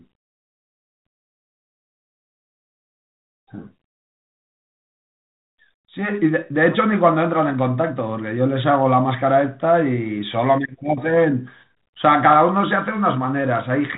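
Nothing goes wrong anywhere in this speech, which sits comfortably in the narrow telephone band you'd expect from G.726 ADPCM at 32 kbit/s, with only the light coding texture that rate carries.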